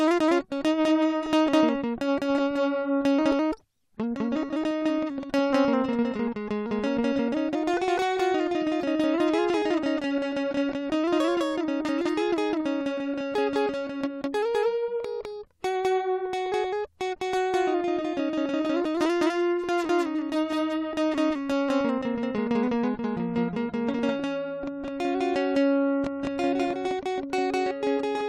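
From the start of the music to the end, every sound arrives twice: a full-band copy trails the original by about a fifth of a second, at roughly the same level. This is a doubled audio track, likely from the signal being captured a second time through a slower path and mixed back in. The copy has no decay or added room colour, so attacks repeat as a clean, flat slapback that smears the rhythm.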